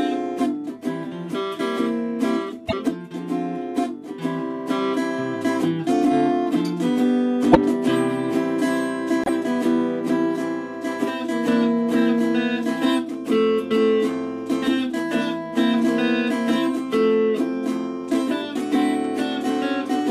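The audio jumps forward three times, at 2.68 to 2.74 s, 7.51 to 7.57 s and 9.24 to 9.29 s. Each glitch is brief, about two 26.1 ms MP3 frames long. The likely cause is a broken MP3 bit reservoir: frames were lost, so the following frames decoded against the wrong borrowed bytes.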